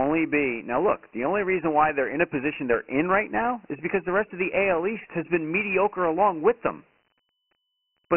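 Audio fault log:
Throughout, Dialogic VOX ADPCM: the speech has nothing above 3 kHz and sits on a thin line-style band from 150 Hz upward. A gritty hiss rides on every syllable. The coder stores each sample as a 4-bit step from a predicted value, and the step size can't keep pace with fast changes, so the errors become rough noise that follows the speech. The 3 kHz ceiling fits a 6,000 sample-per-second rate, about 24 kbps.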